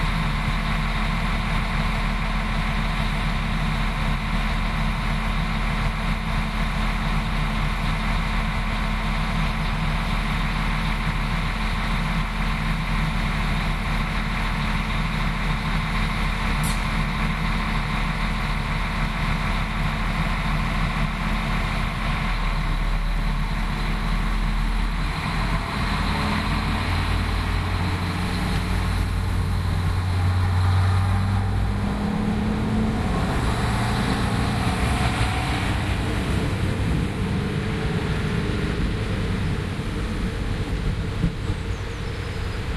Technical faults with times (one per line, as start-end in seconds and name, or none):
none